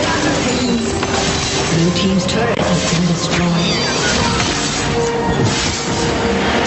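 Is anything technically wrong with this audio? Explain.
Yes, two faults stand out. Gain pumping runs throughout: loud and soft parts are pulled closer in level and the sound is squashed, with the gain swinging roughly 15 dB. This is likely from gain set far too high with a fast limiter clamping down. Loose connector crackle appears from 4.47 to 4.68 s as an irregular burst of scratching from a contact rapidly making and breaking. Codec noise would be steady, but this crackle is ragged and brief. The audio also passed through a call codec with a top end near 8 kHz.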